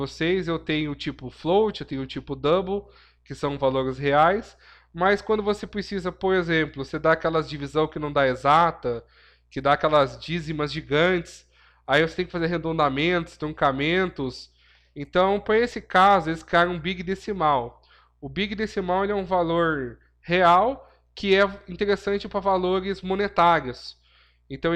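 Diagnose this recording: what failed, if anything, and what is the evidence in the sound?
Nothing in the recording points to a failure at any stage of the chain. No part of the sound carries evidence of a fault.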